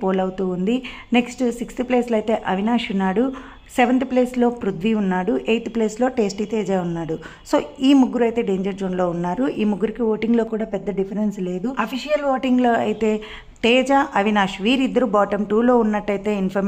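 Channel delay (comb filtering) appears from 10.47 to 12.43 s. For this stretch one channel runs roughly 5 ms behind the other, and when the two are folded to mono, the content they share cancels at regularly spaced frequencies. The lowest notch falls somewhere near 100 Hz, with further notches repeating up the spectrum. The result is a hollow, phasey tone that stays fixed until the channels realign at 12.43 s.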